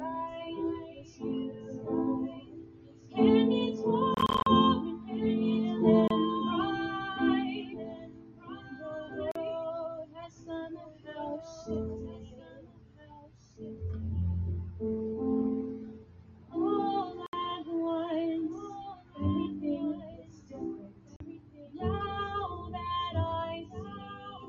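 Throughout, a fainter, dry repeat of everything trails the sound by about two seconds at roughly 10 dB down, with no added room tone. This is a doubled audio track, most likely a second capture path or an edit that mixed in an out-of-step copy. Also throughout, sustained parts and tails keep sinking and recovering by around 15 dB while attacks stay intact, giving a pumping, thinning effect. That is a noise suppressor applied to music or sounds, treating steady content as noise.

The same suppressor causes distinct sound cut by the noise suppressor episodes, with held or fading material dropping by up to about 12 dB at 0.8–3.2 s, 7.6–9.2 s, 10.0–11.1 s, 12.2–13.6 s, 15.9–16.6 s, 18.9–19.2 s and 20.0–21.8 s. From 23.6 s to the end the drop is about 9 dB.

Short holes of silence appear, and the sound picks up afterwards as though it had kept playing. From 4.14 to 4.47 s there is a cluster of scattered gaps totalling about 173 ms, the longest about 40 ms. 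Single holes follow at 6.08–6.11 s (27 ms), 9.32–9.36 s (40 ms), 17.26–17.33 s (67 ms) and 21.16–21.20 s (40 ms). These are likely Bluetooth dropouts, where packets missed their deadline at the headphones.

Nothing above 8 kHz is present, which fits call microphone processing.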